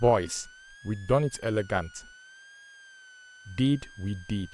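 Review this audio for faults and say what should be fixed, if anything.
A switching supply whistle runs throughout the speech, a thin tone wandering between about 1.4 and 1.7 kHz, roughly 25 dB below the voice. A nearby converter is cycling in an audible burst mode or beating with another supply, and its ripple reaches the audio path. Powering the microphone chain from a linear or well-filtered supply, with the switcher kept away from the inputs, would prevent it.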